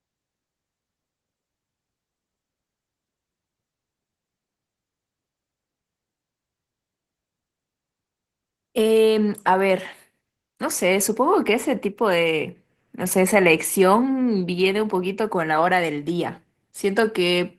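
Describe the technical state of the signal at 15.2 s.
Opus voice compression runs through the whole clip, including 15.2 s. The speech sounds like a hybrid coding, with linear prediction below 8 kHz and a transform layer above, at a rate that fits about 16 kbps. Coarse excitation coding leaves the speech plainly hoarse and slightly robotic.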